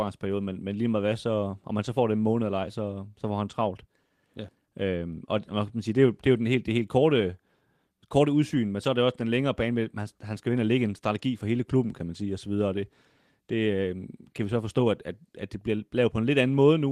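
Nothing in this speech recording stands out as a technical fault, so there's nothing here to flag.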